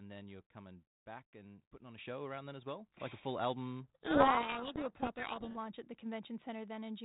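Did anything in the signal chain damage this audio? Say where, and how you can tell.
Yes. In call processing, the microphone volume stepped up twice: at 1.98 s, between "and putting on a" and "show around then as", by about 8 dB, and at 3.0 s, after "around then as well", by about 4 dB. Voice and background jump together, and the waveform envelope rises in a clean step each time.

At the codec stage, a codec payload misread runs from 3.84 to 5.58 s, after "a full" until "at the". The decoder is taking G.726 code words in the wrong bit order, so the speech is buried in harsh distortion. The spectrogram shows rasping broadband energy filling the band up to 4 kHz, with the speech harmonics smeared.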